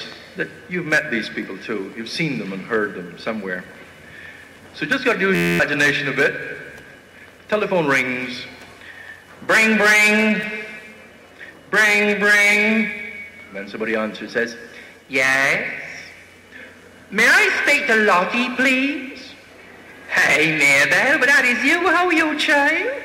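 At 5.35 s the audio stops moving forward and locks into a system hang loop until 5.60 s. One tiny slice, 11.61 ms long, repeats exactly 21 times. That cycle rate of 86.1 Hz turns the slice into a steady buzz. The loop length fits a 512-sample buffer. The computer or driver froze while the sound hardware kept replaying its ring buffer. About a fifth of a second of real audio is lost in the gap.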